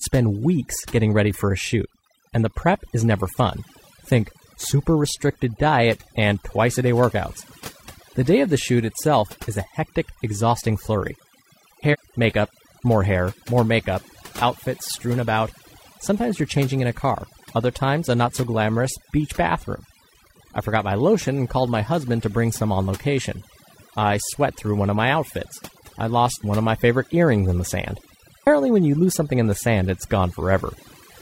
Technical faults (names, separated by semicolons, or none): overdone noise removal; compressed frames skipped